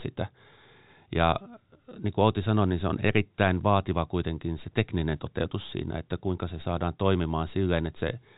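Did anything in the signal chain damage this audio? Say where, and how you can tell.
No, nothing in the signal chain damaged this audio.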